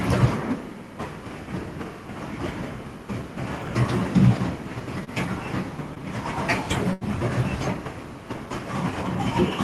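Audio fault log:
3.62–3.68 s, chunks out of order: a 20 ms slice arrives two chunks late, so sound jumbles briefly; the waveform shows three abrupt joins.
5.04–5.10 s and 6.93–7.04 s, short stall from a late packet: the last sound is held for about 28 ms and then 80 ms before resuming, showing as flat, smeared spectral bands.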